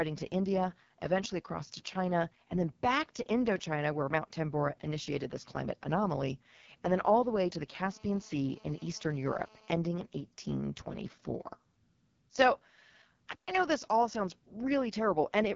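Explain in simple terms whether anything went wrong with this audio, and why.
AMR wideband (HD Voice) codec, throughout: the speech went through the compression used for HD phone calls, run at one of its lowest settings. That squeezes the voice so hard it sounds rough and raspy, and nothing above about 7.3 kHz survives, so it lacks crispness.

GSM phone buzz, 7.86 to 9.72 s: a mobile phone on a call was close to the recording equipment. Its radio bursts, about 217 per second, leaked into the audio circuit and came out as a harsh, steady buzz unrelated to the speech.

Playback stall, 13.33 s: the sound cuts out mid-flow for about 150 milliseconds, then carries on. The likely cause is that the player briefly ran out of audio data, or was held up, and went silent until it caught up.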